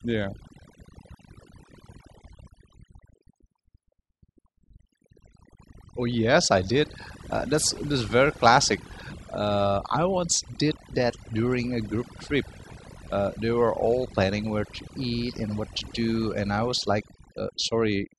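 Overdone noise removal affects the whole recording. A noise reduction stage was pushed too hard. It cut individual frequency bands that sat near its noise estimate. Quiet parts of the speech went too. The background drops and breaks up into twinkling specks.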